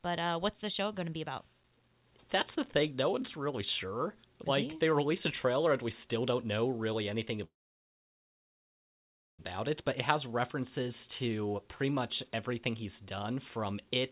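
Packets were most likely held up in transit at 7.44 s, just after "don't know really anything". The jitter buffer ran dry and the receiver had nothing to play until 9.41 s. This call audio freeze brings in about 1.9 s of silence. When packets arrive again, the speech continues exactly where it stopped, so nothing is lost, but everything afterward lands about 1.95 s late. The band, empty above 4 kHz, fits a G.711 A-law call path.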